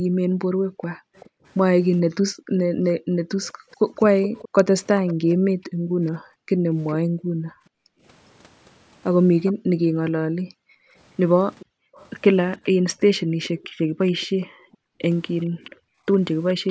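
From 0.0 to 3.95 s, the echo canceller clamps the microphone while the far end plays, so the background is gated: room sound dips as much as about 40 dB, vanishing for a couple of seconds in all before it returns. Within that stretch, at 0.82 to 1.3 s, echo leaks through from a far-end loudspeaker that the canceller likely failed to fully cancel. A faint copy of the speech comes back about 0.42 s late, well below the main level. The echo leak returns from 3.71 to 6.93 s, somewhat stronger, with the same 0.42 s lag, while gating again drops the background from 5.36 to 8.03 s. A brief scrap of echo, delayed about 0.41 s, appears at 9.45 s. From 9.53 to 16.06 s the gate cuts the room sound, by up to about 40 dB, for roughly three seconds in total. Meanwhile, from 11.59 s to the end, a delayed copy, about 0.42 s behind the speech, trails it.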